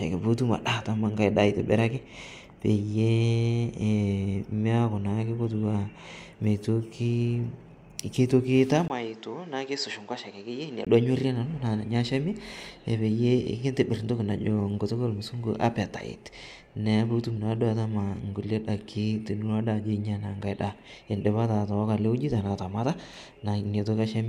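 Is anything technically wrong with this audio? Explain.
Yes. From 8.88 to 10.87 s, just before "duo anyorie nanu naa", the input likely switched to a poorer device. After a 20 ms gap, the speech loses everything above 8.1 kHz, drops about 10 dB, and sounds dull and boxy over a different noise floor about 30 dB down.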